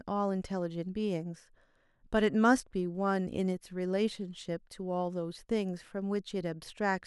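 No technical faults are audible in the speech.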